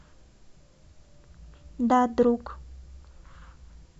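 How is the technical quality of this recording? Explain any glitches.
No technical glitches can be heard in this speech recording. Nothing in the audio calls for explanation.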